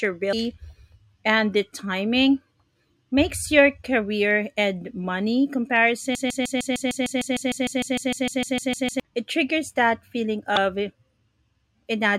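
Damaged data in a compressed stream opens this speech clip at 0.32 s and returns at 10.56 s, just after "it triggers that feeling". Each is a brief blip where corrupted bytes in the encoded stream made the decoder misread or drop a frame, lose sync and skip forward to the next valid frame header. A broken-record loop runs from 6.15 s to 9.00 s, ending right before "it triggers that feeling": a 152 ms fragment repeats exactly 19 times back to back. The most likely cause is a stall in the player, encoder or stream that kept resending the last buffered piece, so the speech that belonged in those roughly 2.8 seconds is gone.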